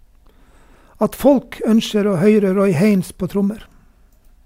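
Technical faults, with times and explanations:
No technical faults are present, so there are no times or explanations to give.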